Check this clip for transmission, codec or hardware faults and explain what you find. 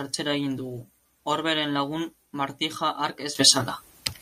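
One fault is audible, a sudden gain jump near the end. At 3.35 s the speech and its background noise leap together by about 14 dB and stay loud to the end, likely a digital gain change applied without a ramp.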